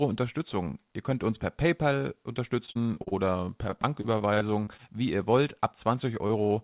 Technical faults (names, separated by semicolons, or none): repeated packet loss (robotic sound); short concealed packet loss